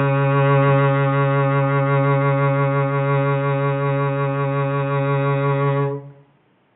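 No technical faults occur at any point in the music.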